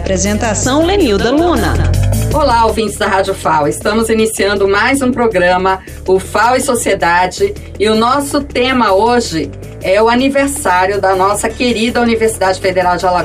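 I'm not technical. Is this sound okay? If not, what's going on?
No. At 12.48 s there is a single sharp click, like a tiny tick. That is dropped samples: a sliver of the recording, a tiny fraction of a millisecond, likely went missing, so the sound jumps abruptly from one point to a slightly later one.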